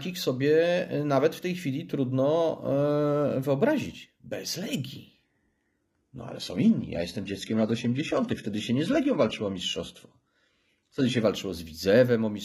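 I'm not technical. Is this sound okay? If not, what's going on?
No. From 5.23 to 11.23 s, an adaptive stream at a lower bitrate kicks in: the connection slowed, so playback switched to a lower-quality copy, leaving the speech duller and artificial with no gap.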